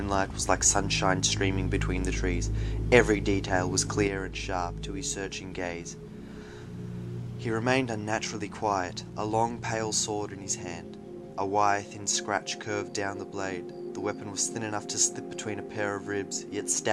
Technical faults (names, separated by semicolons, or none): one channel drops out